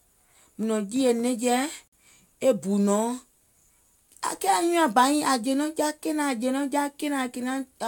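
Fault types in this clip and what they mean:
Gap between stream segments: the timestamps of two adjoining segments fail to meet, and the player fills the hole with silence. Here a hard-edged dropout of about 49 ms sits at 1.88 to 1.93 s, between "jììyè nɛ̀ŋje" and "e bù", delaying the speech without losing any.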